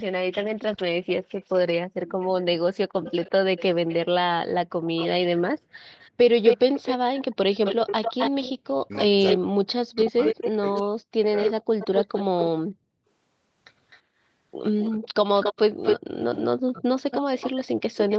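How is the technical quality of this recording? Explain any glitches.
The recording has clear call-processing faults: repeated echo, brief background dropouts, and a stretch where the talker is cut down. The audio has nothing above 8 kHz, which fits a wideband call codec and is not itself a fault.

Echo leak: From 1.08 to 3.95 s, a delayed copy of the speech trails it by 332 ms, about 20 dB quieter. From 4.86 to 12.45 s and from 13.9 s to the end, the copy lags by 254 ms at roughly the same level as the original. The likely cause is a far-end loudspeaker whose echo canceller let its microphone pickup return down the line. Unlike reverberation, this is a distinct, discrete repeat at a fixed delay.

Background gated by the echo canceller: The room sound drops by about 40 dB for short moments at 5.59–5.73 s, 8.54–8.58 s, 12.72–12.92 s and 16.56–16.73 s, then returns. The canceller clamped the microphone while the loudspeaker played. 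Only the background vanishes, and each drop lasts under a quarter second.

Speech suppressed in double talk: Between 8.86 and 11.59 s, the talker's own voice drops in pieces, by up to about 40 dB, for roughly two seconds in total. Both sides were speaking, likely leaving the canceller unable to tell voice from echo. Unlike gating, this removes the speech itself, not just the background.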